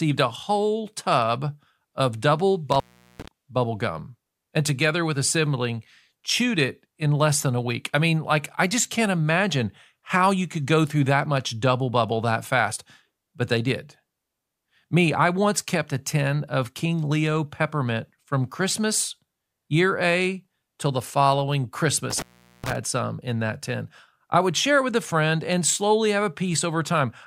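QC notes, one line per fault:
2.72–3.28 s and 22.10–22.76 s, intermittent contact: a loose connection opens for about 0.40 s after "whole tub of double" and 0.42 s after "till the following". Each shows as a near-flat waveform gap and a near-empty spectrogram band between sharp vertical crackle clicks.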